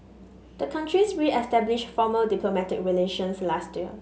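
No technical faults can be heard in this recording.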